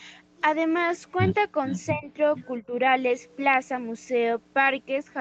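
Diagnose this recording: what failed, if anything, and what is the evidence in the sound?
Echo leak, in the call processing stage. At 1.66 to 1.83 s and again at 2.34 to 2.46 s there's a repeat of the speech trailing the original by 449 ms, roughly 10 dB down the first time and nearer 15 dB down the second. That's likely the far end running on a loudspeaker, with its echo canceller failing to strip out everything its mic picked up, so a delayed copy came back down the line.

Speech suppressed in double talk, also in call processing. Right after each echo burst the main speech sinks: from 1.92 to 2.1 s it dips by something like 15 dB, and from 2.61 to 2.72 s by about 10 dB. The likely story is that both ends were talking at once, the canceller couldn't tell its own talker from the loudspeaker echo, and it ducked the lot.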